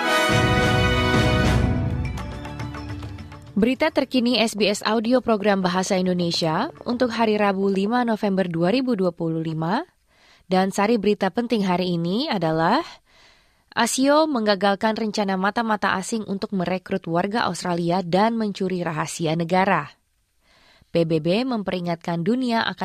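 From 4.58 to 7.99 s a train of clicks ticks over the sound, about thirty at a regular 8.5 per second, likely nearby equipment interference.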